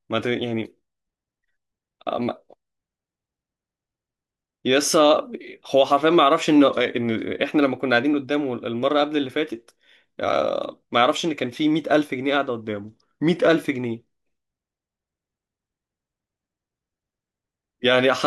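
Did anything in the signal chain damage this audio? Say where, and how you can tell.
Yes. At 6.70–7.43 s and 12.69–13.48 s, speech slows 5.9% and drops 106 cents, then snaps back. This is likely a drift correction step in the clock-sync buffer.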